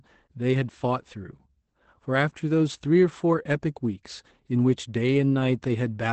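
The clip is speech with Opus voice compression throughout. Nothing sounds above about 8.5 kHz, so the band is wideband and dull. The voice is muffled, hoarse and faintly robotic from coarse SILK excitation coding. This fits a low bitrate near 12 kbps.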